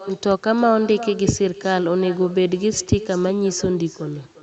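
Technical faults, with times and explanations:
Throughout: echo with no canceller. Every phrase of speech returns as a fainter copy roughly 0.4 s later. The copy sits about 17 dB below the direct voice. It sounds thinner than the original. The far end is playing the call over a loudspeaker, and its microphone picks that sound up again. Nothing on that side removes it, so it travels back across the network. The band limit near 8 kHz fits the call codec's normal coding.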